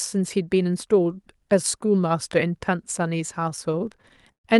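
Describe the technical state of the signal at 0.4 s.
At 0.4 s the speech is intact, with no dropout, glitch or other fault, only the ordinary character of the call codec it was carried through.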